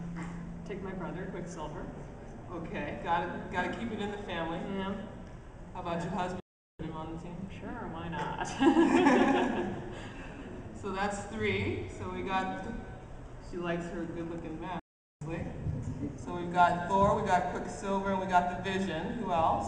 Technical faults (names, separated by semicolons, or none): playback stall